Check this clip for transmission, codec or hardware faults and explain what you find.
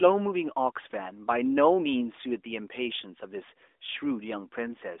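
Nothing here points to a transmission, codec or hardware fault, and the speech simply carries the narrow telephone-band character of the AMR narrowband mobile codec, with nothing above about 3.8 kHz and only a light coding texture that fits its 12.2 kbps mode.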